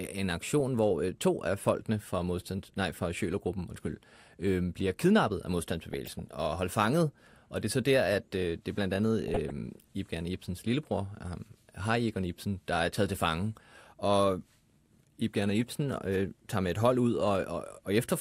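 From 5.93 to 6.29 s and again from 9.28 to 9.51 s, DAB burbling breaks into the speech. Bit errors, around 0.2 percent, slipped past error correction, so wrong samples put short blips of noise into single MP2 sub-bands. A spectrogram shows flickering rectangular band blocks.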